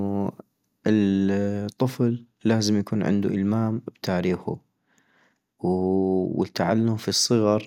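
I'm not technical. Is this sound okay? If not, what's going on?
Yes, nothing wrong turns up anywhere in this recording.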